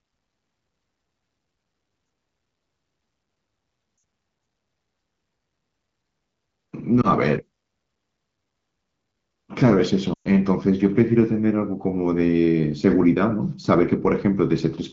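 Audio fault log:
3.97–4.03 s, lost AMR speech frames: a short drop to near silence where the decoder covered a gap of about 60 ms, roughly three 20 ms frames, by reusing the last good pitch and vocal tract settings at falling gain.
7.01–7.08 s, lost AMR speech frames: a brief dip that fits a single dropped frame.
10.13–10.28 s, lost AMR speech frames: the longest gap, about 120 ms. The sound drops to near silence within two frames, then comes back weak or rough for a moment.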